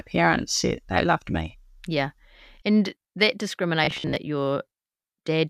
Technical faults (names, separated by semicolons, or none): robotic sound from repeated short buffers